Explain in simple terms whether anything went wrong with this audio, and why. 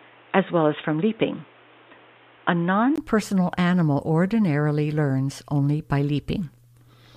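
For the first 2.98 seconds the speech sounds dull and boxy, with nothing above about 3.8 kHz and faint added background noise. A 20 ms gap follows, then fuller sound returns at "personal animal ordinarily learns". This is likely an input switched to a poorer device.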